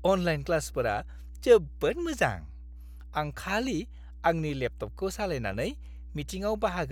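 A speech recording with mains hum running from start to finish: a steady 60 Hz tone, roughly 15 dB below the speech, picked up through a ground loop or nearby transformer. Unlike broadband rumble or handling noise, it holds one fixed pitch and never varies with the talking.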